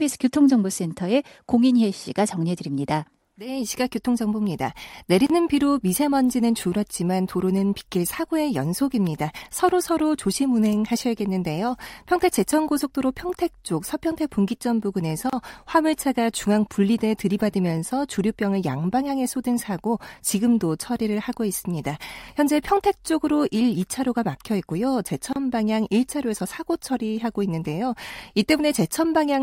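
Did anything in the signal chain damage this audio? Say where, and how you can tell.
Yes, at the codec stage. There's a gap at a join of encoded pieces at 5.27, 15.30 and 25.33 s: a 31 ms hole every 10 s, then the speech picks up where it left off. The chunks were encoded separately and joined untrimmed, so encoder delay and end padding stayed in.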